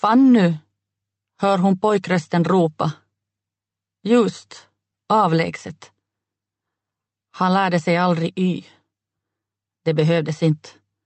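Throughout the clip, the gain swings by around 5 dB, so loud and soft parts sit squashed together: gain pumping, likely from input gain set far too high and a fast limiter clamping it. The audio also passed through a call codec, Opus to judge by the sound, with the top end stopping near 8 kHz.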